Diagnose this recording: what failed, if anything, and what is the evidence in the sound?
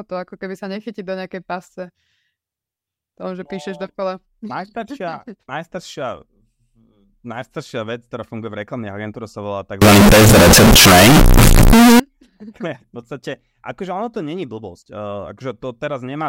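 A sample-format conversion fault, likely float read as integer, with 32-bit float samples taken as 32-bit integers. From 9.82 s to 12.00 s, right after "agentúre sa volá", the speech becomes a loud, harsh, near-square wave at an almost fixed, high level. Background noise matches the speech level, but pitch stays traceable.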